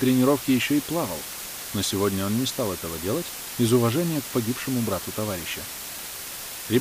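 From start to finish there's low bit depth with dither: five bits plus dither turns rounding error into a steady, even hiss, only about 10 dB under the sound.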